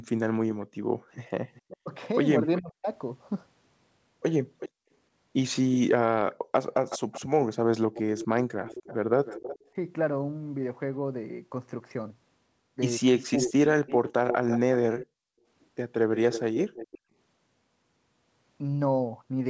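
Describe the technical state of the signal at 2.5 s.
An echo leak runs from 1.12 to 2.61 s. A faint copy of the speech returns about 373 ms late and about 20 dB down, likely from a loudspeaker echo the canceller missed. Its fixed lag sets it apart from room reverb. Overlapping it, from 1.83 to 2.87 s, speech is suppressed in double talk. The speech dips by up to around 40 dB in pieces totalling roughly 0.4 s, likely because the canceller ducked everything during overlap. This is not a dropout, because the cuts follow the overlapping talk.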